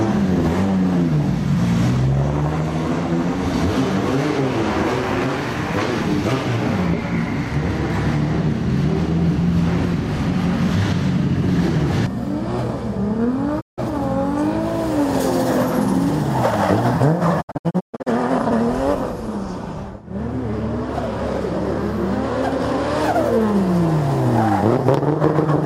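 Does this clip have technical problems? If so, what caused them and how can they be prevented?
Yes: a digital broadcast dropout occurs twice. The receiver stopped getting frames it could decode and muted until valid ones returned, with a quick fade of about 20 ms. At 13.60 s the sound vanishes for about 160 ms, which fits roughly five frames, and comes back at 13.80 s. From 17.40 to 18.08 s the muting breaks up into several short holes totalling 384 ms, the longest 128 ms. Audio sent during the gaps is gone. Better antenna placement, a stronger signal or a more robust transmission mode would prevent it.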